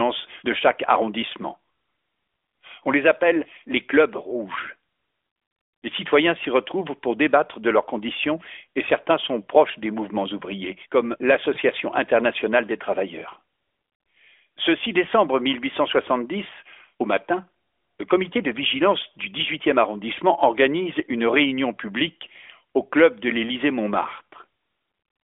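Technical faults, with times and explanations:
11.54 to 11.59 s, lost AMR speech frame: between "des mouvements ouvriers comme" and "internationale des travailleurs", a single 20 ms frame fails to arrive intact. The decoder fills the gap by repeating the previous frame's pitch and vocal tract settings at lower gain, so the sound briefly dips or warbles before recovering. On a waveform the envelope sags for that short stretch. On a spectrogram the harmonics smear flat and fade slightly, all within the narrowband 300 to 3500 Hz band.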